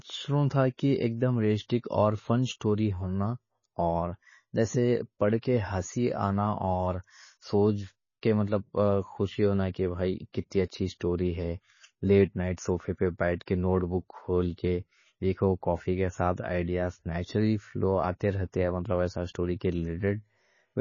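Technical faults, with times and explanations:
Throughout: MP3 compression. The speech has nothing above 7 kHz, so it sounds dull and boxed-in, and the codec damage is plainly audible, with a watery, swirly texture on the voice and chirpy, metallic edges on the s sounds. The likely cause is an MP3 encoder starved of bits, which fits a low bitrate around 24 kbps. It chops the treble at a fixed point and drops weak frequency lines that flicker on and off between frames.
1.68 s: pre-echo. There's a brief hiss, about 12 ms long, just ahead of a sharp attack, and the attack itself comes out a bit soft. That's the transform coding at work. The attack lands late in a block, and the quantisation noise sized for the loud part gets spread across the whole block, spilling into the quiet moment before the onset where nothing should be.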